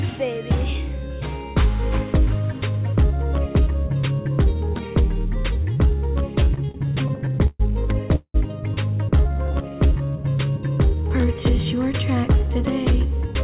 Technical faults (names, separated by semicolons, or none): repeated stalls (stutter); call audio freeze; jitter buffer slow-down